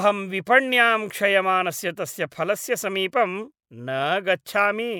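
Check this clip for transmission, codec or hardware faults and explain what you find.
Nothing in this speech clip points to a problem with how it was sent, encoded or recorded.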